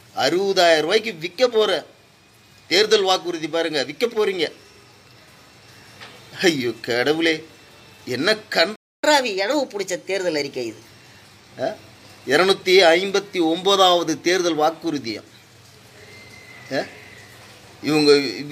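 A playback stall at 8.76 s silences the sound for about 275 ms, likely because the player ran dry of data, before it resumes where it stopped. Catch-up at higher speed follows from 9.04 to 10.87 s: the backlog plays 1.15 times faster, pitch rising about two semitones, then settles back.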